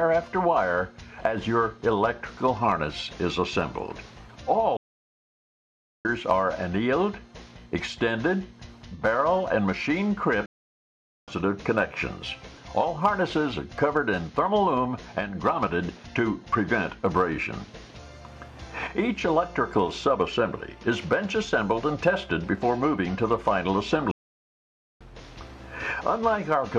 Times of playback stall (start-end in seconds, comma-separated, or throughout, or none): 4.77-6.05, 10.46-11.28, 24.11-25.01